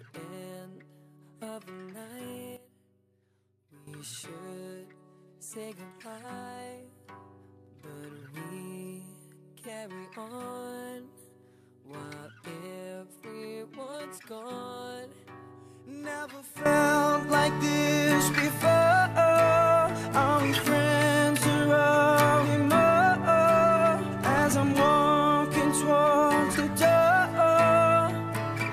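At 2.57 s there's a sudden gain jump: the level falls about 13 dB in an instant, and the background noise drops right along with the sound. It snaps back at 3.87 s. Then at 16.66 s it jumps up about 13 dB and stays there to the end. No fade either time, so it's likely a gain setting applied digitally without a ramp, changing between one sample and the next.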